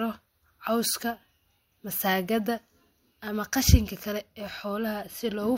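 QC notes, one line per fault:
Nothing stood out on listening to the speech in this clip.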